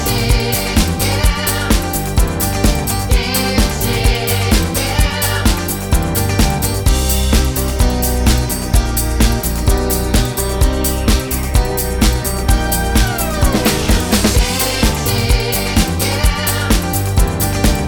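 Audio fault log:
No fault was found in this audio.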